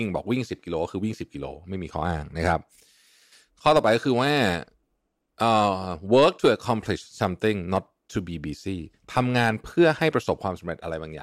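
Two devices in the chain are likely running on unsynchronised clocks, a few hundred parts per million apart, so single samples get dropped or repeated. This speech clip carries clock slip clicks from 0.13 s to the end, faint regular ticks roughly every 70 ms, some two hundred in all.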